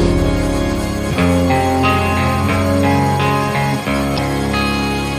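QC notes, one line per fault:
Throughout: MP3 compression, and it's plainly audible. Everything has that watery, swirly quality, with quiet detail flickering in and out from one frame to the next. Sharp onsets come out smeared instead of crisp. That's the likely cause: an encoder that's short on bits, dropping the treble and zeroing out weak frequency lines. The amount of damage fits a rate of about 64 kbps.
4.14–4.19 s: damaged data in a compressed stream. There's a short glitch, roughly 40 ms long. Part of the encoded stream was corrupted right there, so the decoder misread those frames and lost sync. It then had to search ahead for the next valid frame header before normal playback could resume, and that's why you get the glitch.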